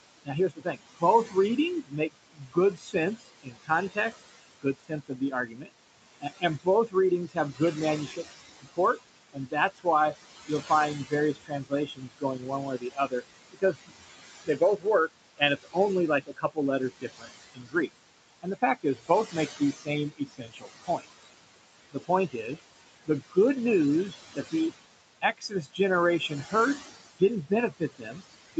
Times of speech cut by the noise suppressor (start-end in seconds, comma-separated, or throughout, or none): 0.25-9.86, 10.48-13.92, 14.46-17.89, 18.42-21.05, 21.92-22.49, 23.06-23.37, 24.10-28.59